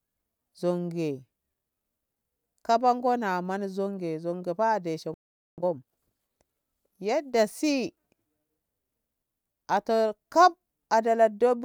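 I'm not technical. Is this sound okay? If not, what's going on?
No. At 5.14 seconds there is a playback stall: the player most likely ran short of incoming data or was briefly held up, so it had nothing to send to the speakers. You hear the speech simply stop in mid-flow and go silent for a little under half a second, until 5.58 seconds, before carrying on.

Straight after, from 5.58 to 6.00 seconds, comes a time-compressed catch-up. Having fallen behind, the player snips out tiny slices of audio and blends the remaining pieces together to make up the lost time, playing that stretch at double speed. The speech sounds rushed but keeps its normal pitch, before settling back to normal pace.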